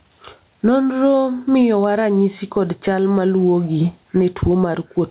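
Gain pumping runs through the whole speech clip, from start to finish. The level rises and falls by something like 15 dB. Loud and quiet passages sit unnaturally close together, giving a squashed sound. The likely cause is input gain set far too high, with a fast limiter clamping down on each peak. Everything is also band-limited to 4 kHz, as the G.711 call path dictates.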